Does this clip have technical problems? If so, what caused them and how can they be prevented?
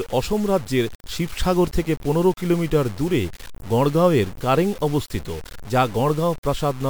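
Yes. Throughout the speech there is a grainy, buzzing distortion that rides on the voice and changes with it, roughest on quiet syllables and word endings, where the sound sputters or drops out between steps. The error sits only about 20 dB below the speech. The likely cause is low bit depth without dither: the audio was cut to 6 bits by truncation, so the rounding error tracks the signal instead of becoming steady noise. To prevent it, keep at least 16 bits and apply dither when reducing word length.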